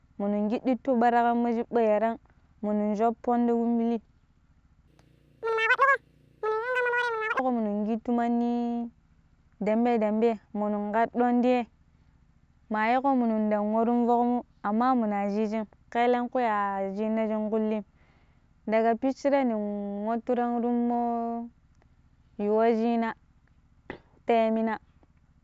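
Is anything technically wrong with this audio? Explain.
Yes. From 4.87 to 7.39 s there's a wrong sample rate: the speech runs twice as fast and an octave high, which points to 16 kHz audio played at 32 kHz.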